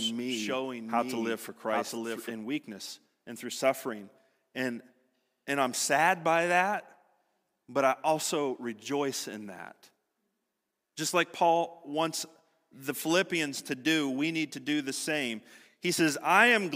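From the start to 2.32 s, a doubled audio track: a second copy trails by roughly 0.7 s, about 5 dB quieter. It likely comes from a slower capture path, and it cuts off abruptly.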